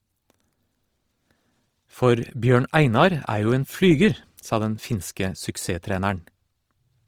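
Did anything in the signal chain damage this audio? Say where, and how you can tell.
Yes. Opus compression at the codec stage, throughout: the speech is grainy and rough yet keeps full bandwidth. That fits CELT mode near 24 kbps, likely filling starved bands with noise.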